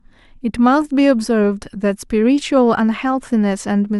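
Overlap between stream segments at 2.41 s: two segments' time stamps collide, so a sliver of speech is trimmed away and the waveform jumps, heard as a tiny skip.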